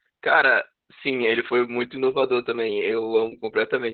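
Opus voice compression runs throughout this speech: a low bitrate near 8 kbps forces narrowband SILK coding, cutting everything above about 4.3 kHz, so speech sounds muffled, hoarse and slightly robotic.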